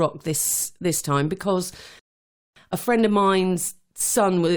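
A rebuffering stall interrupts the speech from 1.99 s to 2.56 s. The player used up the audio it had already downloaded and had to wait for more data before it could continue, so the sound drops into silence for roughly 0.57 s. When playback picks up again, it continues from exactly the point where it broke off, with nothing skipped or repeated. The gap only lengthens the clip by that half-second of dead air.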